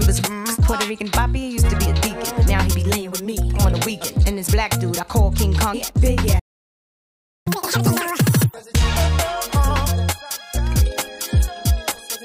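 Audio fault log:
6.39–7.47 s, playback stall: the sound cuts out abruptly in mid-flow and the output falls completely silent for about 1.07 s before resuming. This is likely a player that ran out of buffered data or had its audio thread blocked, so nothing reached the output until it recovered and carried on.
7.47–8.54 s, catch-up at higher speed: immediately after the silence the audio rushes ahead at double speed, with the pitch pushed up by roughly ten semitones, giving a sped-up, chipmunk-like quality for just over a second. The player is resampling its backlog to win back some of the time lost in the stall, so speed and pitch rise together.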